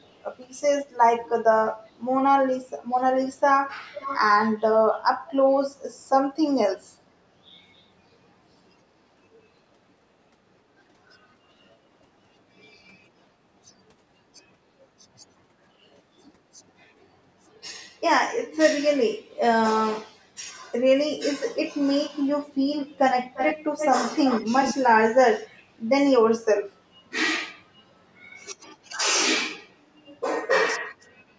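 Echo leak at 0.05–0.21 s, 3.92–4.20 s, 23.34–23.58 s, 23.78–23.89 s and 24.10–24.75 s: a delayed copy of the speech returns, very faint at first, then quite strong near 24 s. It lags by 369 ms, 490 ms and 342 ms, likely from a loudspeaker's sound slipping past an echo canceller.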